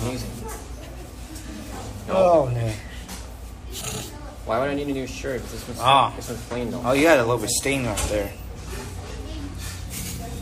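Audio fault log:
No faults heard.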